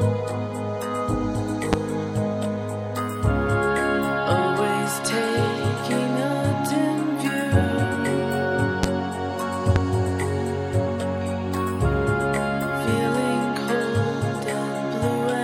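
Loud pops at 1.73–1.76 s, 8.83–8.86 s and 9.76–9.79 s: each is a single sharp, brief pulse roughly 20 dB above the sound, which carries on beneath it. Each is likely a voltage step from a plug, switch, static discharge or driver glitch.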